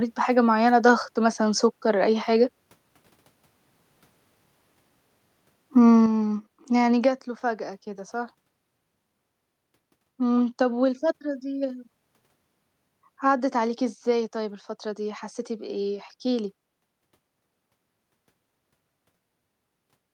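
A speech recording with one level fault. At 6.06 s the microphone volume stepped down: the whole signal, voice and background together, drops by about 6 dB in a single step. The change is abrupt, not a gradual fade. Nothing ramps it back up afterwards. The likely cause is the call software judging the input too loud and cutting the device's input volume once.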